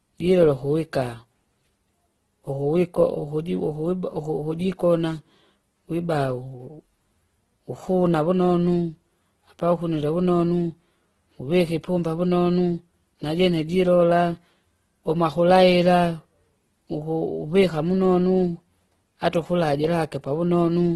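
Throughout the speech, tones sound rough, grainy and noisy, with nothing above about 12.2 kHz. The likely cause is heavy Opus compression in its music mode, at a rate pointing to roughly 12 kbps. Filled bands leave few holes, so it swirls less than MP3.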